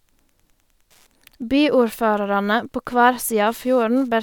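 A faint, steady ticking runs underneath the speech from start to finish, roughly ten clicks every second and sitting about 45 dB below the speech. This is Wi-Fi interference. A Wi-Fi radio close to the audio circuitry sends a beacon every 102.4 ms. The circuit rectifies those radio bursts, turning each one into a small audible pulse, so the beacon's timing comes through as an evenly spaced tick beneath the speech.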